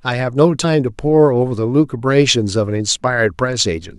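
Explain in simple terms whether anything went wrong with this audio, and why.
At 0.63 s there is a brief blip in the speech. This comes from damaged data in a compressed stream. Some of the data was wrong, so the decoder lost its place briefly.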